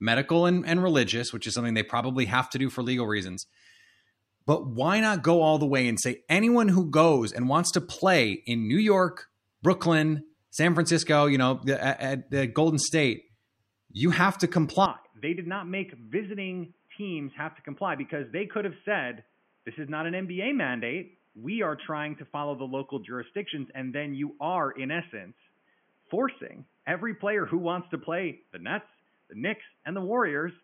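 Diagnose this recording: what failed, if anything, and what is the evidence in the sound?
At 14.86 s, right after "you have to", the speech abruptly turns dull and boxy and stays that way to the end. Nothing remains above 3.3 kHz, the level falls by about 10 dB, and a new noise floor appears roughly 40 dB under the speech. There is no gap at the change. The failure sits at the capture stage. The input likely switched to a poorer device, such as a headset in call mode, whose narrow band, lower gain and own hiss replace the original microphone.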